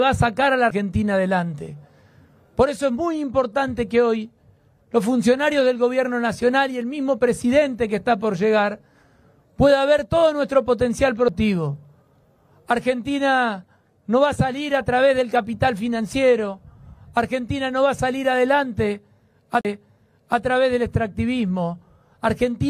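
Three CD skips here: quick ticks at 0.70 s and 11.28 s, then a longer one from 19.61 to 19.65 s. Each is the laser being thrown, by a knock or a flaw in the disc, onto another turn of the disc's spiral, so the player mutes briefly and picks up from a different point. The first two gaps are only a few milliseconds, while the last is a longer dropout of around 40 ms before the sound resumes in the wrong place.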